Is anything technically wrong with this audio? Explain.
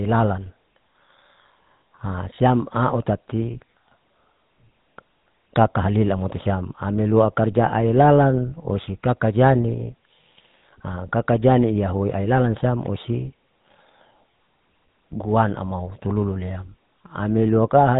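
Yes. Throughout, the speech has passed through the GSM full-rate codec, which fits a 13 kbps coder: it models the vocal tract, excites it with sparse regular pulses and discards everything above 4 kHz, leaving a plainly audible buzzy, gravelly roughness with a dull, band-limited top.

From 2.36 to 2.39 s, just before "au tati", there are lost GSM frames, which fits a single missing 20 ms frame. The decoder repeated the previous good frame's settings, so that instant turns into a brief rough, metallic ring before the speech resumes.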